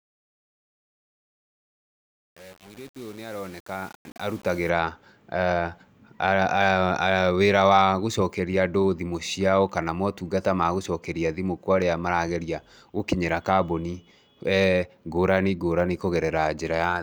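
A speech recording whose opening fade-in, running from the start to 4.69 s, sounds gritty where it is quietest. This is truncation distortion on a fade: the undithered gain stage's coarse steps point to roughly 7-bit resolution, squaring off low-level waveforms.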